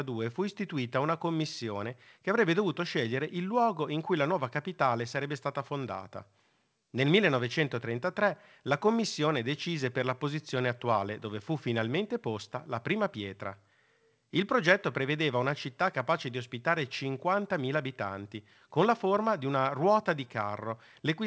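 No technical faults are audible.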